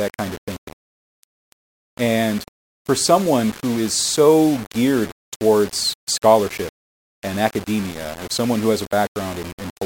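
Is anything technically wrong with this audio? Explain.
Yes, there's a problem running through the whole speech clip: it sounds like low bit depth without dither. Quiet passages turn gritty and sputtery, with grainy distortion that shifts with the sound, sitting only around 20 dB down. That's likely the signal rounded to just 5 bits with no dither.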